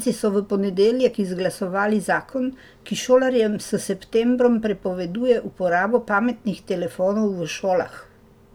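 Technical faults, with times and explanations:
No technical faults can be heard in this speech.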